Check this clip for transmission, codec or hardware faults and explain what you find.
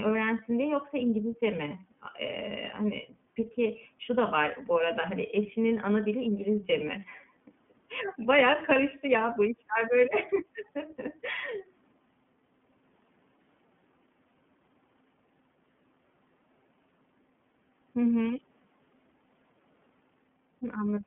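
The clip has one fault that runs through the whole recording: iLBC codec damage. The speech is confined to a telephone line band of about 150 Hz to 3.4 kHz, and nothing is present above 3.7 kHz. iLBC codes the excitation of each frame independently of the one before, which fits its 13.33 kbps mode with 30 ms frames. The damage is plainly audible. The speech stays clear but sounds rough and synthetic, and it lacks any high-frequency air.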